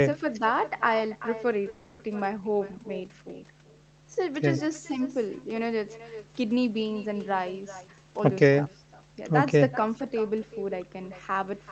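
From the first second to the last, a mains hum sits under the speech. It is a steady low tone at 50 Hz, with some low harmonics above it. It sits roughly 15 dB below the speech. A ground loop or a nearby transformer has let the power line into the signal path. The tone never changes in pitch or level.

Echo with no canceller also runs through the whole clip. Each phrase comes back as a fainter copy, about 13 dB down. The copy trails by roughly 400 ms. It sounds thinner than the original. A loudspeaker at the far end fed the microphone there, and nothing removed that path. So the talker's own sound returned after the network round trip. The clip's narrow Opus band, which points to an 8 kHz cut-off, shapes the echo too.

From 1.69 to 2.01 s there is a call audio freeze. The last sound is held and stretched into a fading buzz for about 300 ms. Nothing is dropped. The speech simply resumes where it stopped, now 300 ms later. 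The likely cause is delayed packets that left the jitter buffer empty. The receiver filled the wait with an extension of what it already had.

From 7.76 to 9.10 s a jitter buffer speed-up takes hold. The speech runs at about 123% of normal speed, yet its pitch stays the same. It sounds hurried. The buffer had built up more audio than its target. To shrink that delay, the receiver cut many short slices of a pitch period or so. Together they remove roughly 300 ms.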